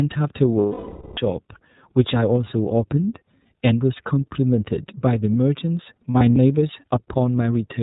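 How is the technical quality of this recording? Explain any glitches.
Technical quality is held back by two things: a narrowband codec coloring the whole clip, and two stretches where the stream dropped out and got patched over.

The iLBC codec is audible from start to finish. Everything above 4 kHz is gone, so the speech sounds boxed-in and a bit rough and synthetic. The damage is plainly audible, which fits the 13.33 kbps mode with 30 ms frames. Each frame's excitation is coded on its own, with no help from the previous frame, so the fine detail gets coarse.

Lost iLBC frames show up first from about 0.59 to 1.20 s, a solid gap of about 570 ms. The decoder covers missing packets by repeating the last pitch cycle mixed with noise and fading it as the loss drags on. Over a gap this long you hear a held, buzzy vowel that gradually thins out before the speech snaps back.

The second stretch of lost iLBC frames runs from about 6.12 to 6.37 s. 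Here 120 ms of audio went missing in bits scattered across about 240 ms, with the longest single hole around 70 ms. The concealment kicks in several times in quick succession, giving short breathy smears. Because iLBC frames stand alone, the voice recovers almost immediately after each hole.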